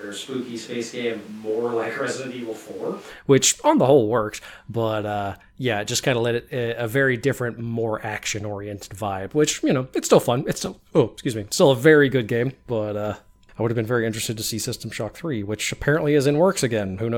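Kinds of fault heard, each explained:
Switch to a distant microphone: From the very start until 3.08 s, just before "which on the whole", the speech sounds roomy and hollow, with thinner bass, a level roughly 5 dB lower and room noise only about 25 dB beneath it. Then it snaps back to a close, full sound. This likely comes from a farther microphone standing in for the close one. The sudden changeover, rather than a gradual drift or added reverb alone, sets it apart.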